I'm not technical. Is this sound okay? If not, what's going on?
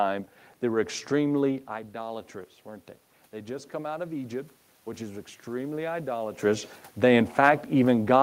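No. Automatic gain rising, from 3.31 to 6.44 seconds: the sound coming into the microphone had become much quieter, so the system's automatic volume control slowly turned itself up to compensate. Because it raises everything together, the voice and the room's background noise swell gradually over those three seconds. It only makes up part of the drop. The speaker's own movements around 1.5 and 6.5 seconds are natural and not part of this fault.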